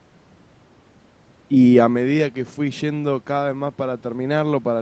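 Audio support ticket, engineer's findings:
No faults found: speech band ends near 8 kHz, consistent with call-path limits; room noise present, level shift around 2 s fits talker movement, Opus-style coding texture within normal range.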